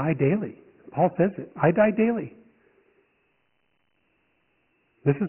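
From start to finish the speech carries Dialogic VOX ADPCM damage, and it's heavy. Nothing gets past 3 kHz, so it's dull and boxed-in like an old phone menu, which fits 4-bit samples at 6,000 a second, around a 24 kbps stream. The coarse step-size tracking leaves a gritty hiss riding right along with the speech, rising and falling with it rather than sitting underneath as steady noise.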